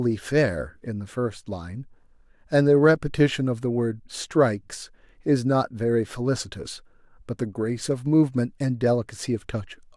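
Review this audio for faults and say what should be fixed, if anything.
Nothing in this recording needs fixing, as no technical fault can be heard at any point. With nothing to prevent, no change to the capture or playback chain is called for.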